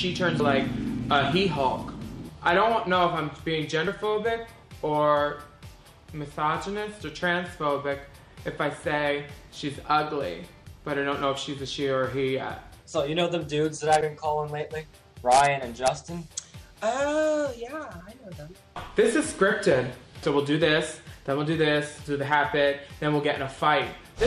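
Compressed frames skipped at 0.39, 3.87, 14.01 and 18.0 s: whole 26.1 ms frames went undecoded, so the audio jumps forward by about 200, 50, 70 and 50 ms. The first gap fits roughly seven frames. Each join is a brief smeared blip, not a click.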